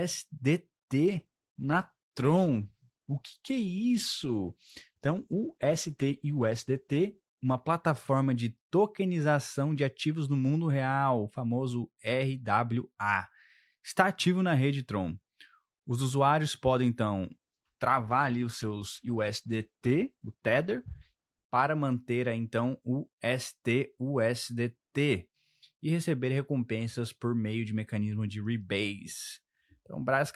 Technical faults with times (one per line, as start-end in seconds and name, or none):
1.06-8.83 call bitrate drop
17.32-21.53 call bitrate drop